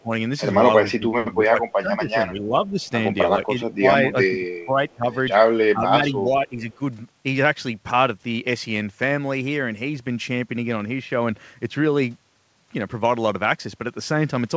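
Speech suppressed in double talk occurs at 0.03–0.13 s, 0.97–1.62 s, 1.81–2.8 s, 3.75–3.84 s, 4.12–5.08 s and 5.74–6.81 s. Here the level sinks, most deeply by roughly 25 dB around one second in and otherwise by about 10 to 20 dB. The likely cause is an echo canceller that could not separate its own talker from the loudspeaker echo during simultaneous talk and pulled everything down.

An echo leak at 4.9–4.94 s leaves a faint, delayed copy about 436 ms behind the original and roughly 40 dB below it. This is likely a loudspeaker's sound reaching the far microphone and slipping past its canceller.

Throughout, the band stops at 8 kHz, which fits G.722 at 64 kbps.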